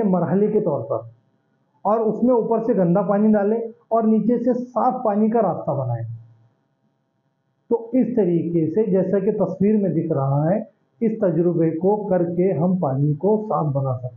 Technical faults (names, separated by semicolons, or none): none